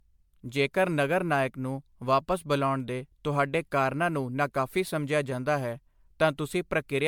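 Generation loss runs from start to finish of this speech. The sound is swirly and hollow, with smeared consonant attacks and a grainy wash that seems heavier than a single encode would leave, though content reaches up to about 20 kHz. The likely cause is repeated MP3 decoding and re-encoding, around ten passes at a rate consistent with 128 kbit/s. Each pass quantises again on a shifted frame grid, so noise and spectral gaps build up.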